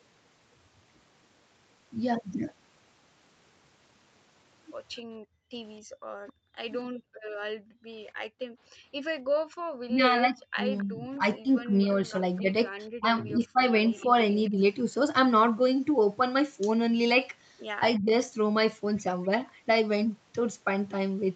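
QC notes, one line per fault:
5.09–6.01 s and 6.88–9.59 s, background gated by the echo canceller: the room tone under the sound falls away abruptly, by about 39 dB in the first run and about 40 dB in the second, for roughly half a second and roughly a second and a half in total, then returns when the canceller releases.
9.87–14.57 s and 17.99–18.14 s, speech suppressed in double talk: the talker's voice itself dips by around 20 dB across about two seconds of the longer stretch and briefly at 18.0 s. The likely cause is the canceller failing to separate the near talker from the far end speaking at the same time. The difference from gating is that the voice is lost, not just the background.
11.82–12.41 s and 13.99–14.5 s, echo leak: a faint delayed copy of the voice trails the original by 270 ms, about 30 dB down, inside the double-talk stretch. It is likely loudspeaker pickup that the canceller did not fully remove. 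A fixed 270 ms offset gives a distinct repeat rather than the smooth decay of room reverberation, and the whole call band, including this echo, stops at 8 kHz.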